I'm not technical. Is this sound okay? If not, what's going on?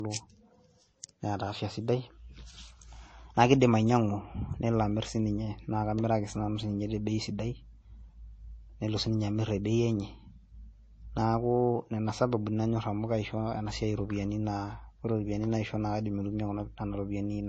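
No. From start to finish the speech sounds dull and muffled, with nothing above about 8.3 kHz, and it carries a mix of different compression artefacts heard together. This is most likely transcoding between lossy codecs: the recording was squeezed into a small MP3 file, then squeezed again into AAC. The second step spent effort preserving the first one's damage, added its own, and the missing treble never returned.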